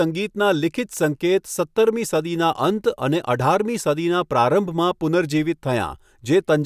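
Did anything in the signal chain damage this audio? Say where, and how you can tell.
No, nothing in the chain from capture to playback audibly damaged this speech.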